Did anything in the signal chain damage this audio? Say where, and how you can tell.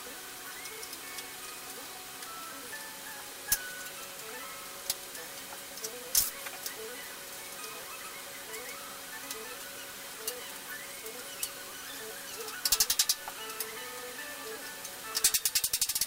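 Yes. The damage is at sample-format conversion, through the whole clip. A constant, even hiss sits only about 10 dB below the signal, with no distortion. That points to low bit depth with dither: about 7 bits, with dither turning rounding error into steady white noise.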